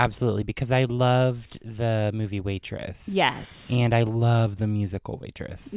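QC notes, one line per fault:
No faults to note.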